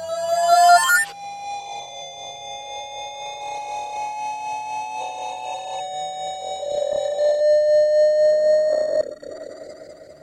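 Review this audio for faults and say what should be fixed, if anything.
No faults found; nothing needs fixing.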